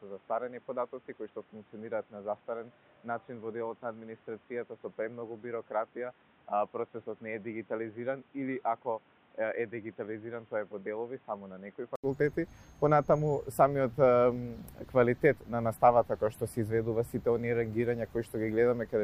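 Until 12.04 s the sound is dull, quieter, noisier and cut off at 3.8 kHz, then an 80 ms gap: likely an input switched to a poorer device, not mere filtering.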